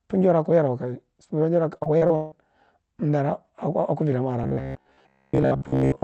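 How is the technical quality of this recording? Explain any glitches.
The recording has two clear glitches, both in speech.

From 1.77 to 2.34 s, the sound turns choppy. This is repeated packet loss: five gaps, the longest 161 ms, were patched by stretching earlier audio, concealing about half that stretch.

From 4.44 s, just after "damwa are", to the end, the voice becomes a rigid, metallic buzz near 66.8 Hz. It is likely robotic sound from repeated short buffers, with roughly 15 ms repeated over most of it.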